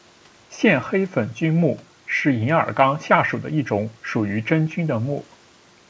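Listening through the speech, nothing stood out as a technical problem.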